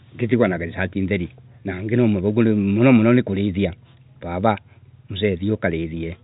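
No technical faults can be heard in this speech clip. It carries the narrow band of G.711 telephone coding, with nothing above about 3.8 kHz and at most a faint level-following hiss from the 8-bit logarithmic steps.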